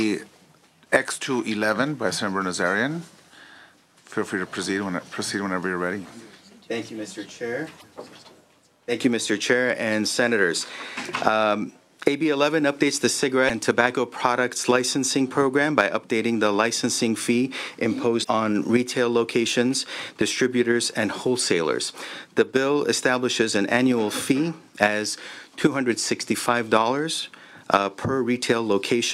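At 7.79–7.84 s and again at 13.48–13.50 s, the audio jumps ahead with a brief glitch. That's likely a broken MP3 bit reservoir: frames went missing, and the next frame pulled its borrowed data from the wrong bytes. The glitch lengths fit 24 ms frames. At 15.79–15.81 s there's a quick crackle from hard clipping, with the peak overdriven by about 2 dB and sheared flat, which sprays harmonics upward. The reservoir glitch returns at 18.23–18.28 s. Two harsher clipped peaks follow at 24.83–24.86 s and 27.74–27.76 s, each overdriven by about 4 dB.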